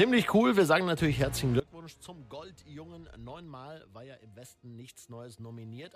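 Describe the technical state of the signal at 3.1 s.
A sudden gain jump is in effect at 3.1 s: the digital gain most likely dropped by about 22 dB between adjacent samples at 1.60 s with no ramp, so the sound and its background noise fall together and stay low to the end.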